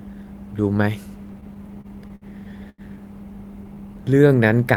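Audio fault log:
1.33–2.25 s, repeated stalls (stutter): the speech keeps catching on itself here. Packets were turning up late, so the jitter buffer kept running dry, nine times in under a second. Each time, the receiver carried the last bit of sound forward until the next packet showed up. That adds up to about 161 ms of filler, with the longest hold 60 ms, roughly 18% of the stretch. Nothing actually goes missing, but it drags and stutters.
2.70–2.81 s, short stall from a late packet: just one hiccup this time. A packet wasn't there when it was due, and the buffer emptied. The receiver stretched the preceding sound for 88 ms until the packet arrived, then picked up exactly where it left off. You hear one sound held too long, maybe with a faint buzz or dip, and no gap in the content. Overall delay goes up by the same 88 ms.
3.64–4.55 s, jitter buffer slow-down: the tail end sounds a bit lazy. 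The receiver was building up its reserve by repeating single pitch periods and slivers of pause, over and over. That adds about 107 ms across the span, so the speech plays at 89% speed with the pitch unchanged. Sounds come out drawn-out, and there may be a slight warble where the same cycle gets repeated back to back.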